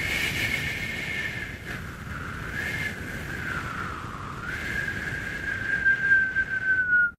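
A recording of sounds, with no technical fault to be heard anywhere in it. Nothing in the audio calls for a time or a cause to be pointed out.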